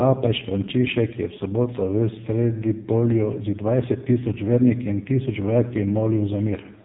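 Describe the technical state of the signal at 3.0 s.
At 3.0 s the speech is passing through an AMR narrowband mobile codec running near its lowest rate, about 4.75 kbps, throughout. Nothing above 3.8 kHz survives, and the heavily reduced pulse model leaves the voice buzzy and synthetic.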